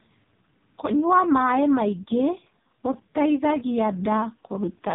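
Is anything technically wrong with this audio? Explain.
Yes. Throughout, it's an AMR narrowband mobile codec at heavy damage. The speech is buzzy and synthetic, which fits the lowest bitrate mode, and nothing gets through above 3.7 kHz.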